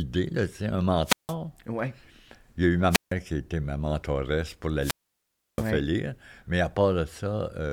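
A French speech recording breaks up three times with a quick swell of hiss, then a hole of near silence, then the voice returning: at 1.04–1.35 s after "c'est un" (silence about 0.16 s), at 2.90–3.13 s between "y a eu ma" and "qui était ma mentoresse" (about 0.16 s), and at 4.79–5.66 s after "était ma mentoresse pour" (about 0.67 s). This is wireless microphone squelch dropout: the analogue FM radio signal faded and the receiver's squelch muted the output.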